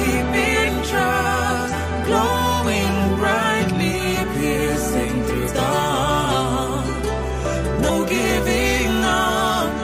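The sound has compressed frames skipped at 1.68–1.73, 5.44–5.49 and 7.85–7.91 s. Each time it leaps ahead about 300 ms, roughly seven 46.4 ms frames. Unlike a dropout there's no silent gap.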